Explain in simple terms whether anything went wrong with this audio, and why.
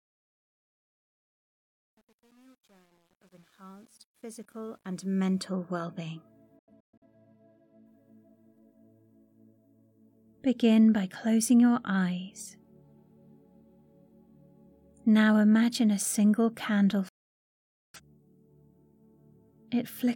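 Two things went wrong. The fade-in at the start was handled with too few digital steps and no smoothing noise, so its quiet opening, worst from 0 to 4.43 s, sounds gritty. This is truncation distortion on a fade, even though the fade itself rises until 5.46 s. Later, the receiver lost the digital signal twice and muted itself, a digital broadcast dropout. The first time, from 6.59 to 7.06 s, causes several short holes, the longest about 0.13 s. The second, from 17.09 to 18.00 s, loses nearly a second of sound.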